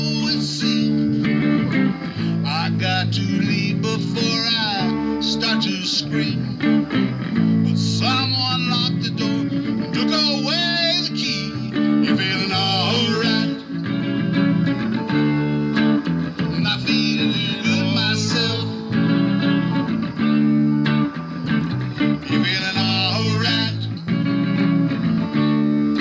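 No technical faults are audible.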